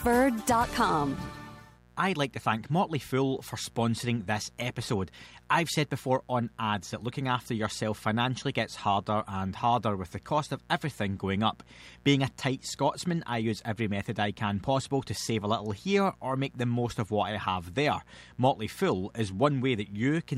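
From start to finish a steady, raspy mains buzz sits under the sound, roughly 30 dB below it. It comes from sharp switching spikes picked up twice per 60 Hz cycle, typically via a dimmer, rectifier or unshielded cable, so its harmonics stack up into the kilohertz range. That spiky, bright edge is what separates it from plain mains hum, which is a smooth low tone concentrated at the 60 Hz fundamental and its first few multiples.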